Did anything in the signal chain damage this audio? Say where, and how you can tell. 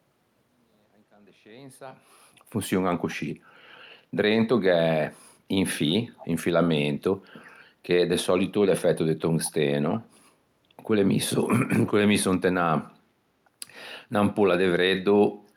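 Yes. Echo leak at 6.17 to 6.27 s and 9.44 to 9.52 s: scraps of speech return 359 ms late, about 20 dB down, likely from incomplete far-end echo cancellation during call processing.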